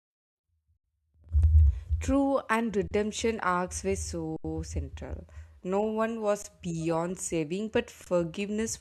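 At 2.88, 4.36, 6.42 and 8.04 s the speech briefly freezes: an underrun with held sample. The output buffer ran dry and the converter sat on its last value, flattening the waveform for 34, 80, 20 and 20 ms. Nothing is skipped, so each stall resumes softly.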